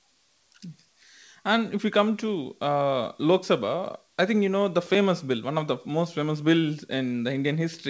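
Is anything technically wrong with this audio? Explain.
No, nothing technically wrong stood out on listening to this speech.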